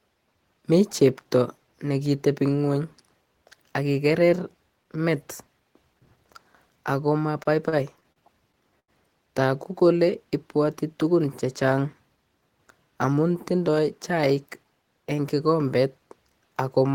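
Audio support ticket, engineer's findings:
Repeated stalls (stutter), 7.43–8.90 s: seven brief holds, longest 88 ms, about 14% of span concealed. Late packets drained jitter buffer; receiver stretched last sound. Nothing lost, timing drags.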